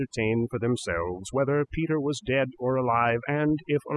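Overdone noise removal runs throughout the speech: a noise reduction stage set far too aggressively keeps cutting frequency bands near its noise estimate, taking quiet parts of the voice with them. The background drops and breaks up into twinkling specks.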